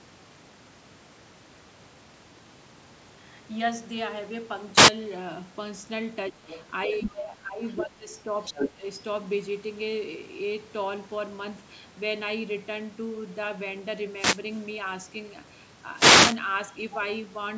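At 4.73 to 4.91 s, a wireless microphone noise hit occurs: the FM radio link fades as reflections cancel, and rising receiver noise produces a brief swish of static over the speech.

Between 6.30 and 8.83 s, the talk overlaps with the far end. This likely caused speech suppressed in double talk, where the echo canceller ducks the talker by around 10 to 15 dB. The dips fall at 6.30 to 6.43, 6.87 to 7.64, 7.81 to 8.08 and 8.24 to 8.83 s.

Around those dips, the other side's voice leaks through. This is likely residual loudspeaker echo the canceller failed to remove. It appears faintly at 6.44 to 6.66 s, then roughly as loud as the talker at 6.94 to 7.19, 7.70 to 7.84 and 8.45 to 8.69 s.

Two more wireless microphone noise hits follow, at 14.10 to 14.46 s and 15.93 to 16.39 s. Each is a signal fade, heard as a longer burst of static.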